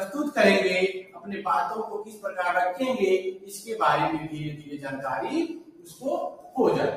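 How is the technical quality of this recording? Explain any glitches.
The recording has a clear processing fault: a speech noise suppressor is working on material it wasn't designed for.

Noise suppressor applied to music or sounds, throughout: the suppressor treats sustained tones and ambience as noise, so its gain swings by around 15 dB. Onsets pass while held portions and decays sink, giving an audible pumping, thinning texture.

Sound cut by the noise suppressor, at 0.98–1.46 s, 2.04–2.30 s, 3.28–3.54 s, 4.57–4.80 s, 5.59–6.03 s and 6.37–6.53 s: in each span the suppressor misjudged steady or fading sound as noise and pulled it down by about 8 to 13 dB.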